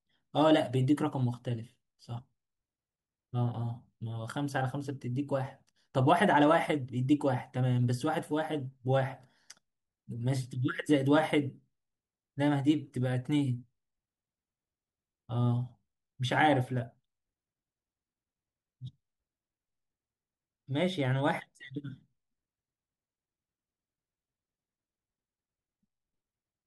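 From 0.11 s to the end, a soft rattle of clock slip clicks runs under the speech: single-sample slips about every 20 ms, likely from two free-running clocks about a tenth of a percent apart. Unlike dropout crackle, the ticks are evenly spaced and vanish in pauses.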